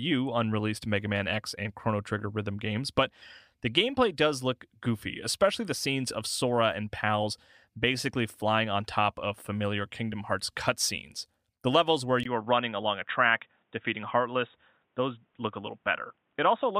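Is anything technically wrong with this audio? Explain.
Yes. At 12.23 s, just after "levels where", the input likely switched to a poorer device. After a 20 ms gap, the speech loses everything above 3.8 kHz and turns dull to the end, with faint new background noise but unchanged loudness.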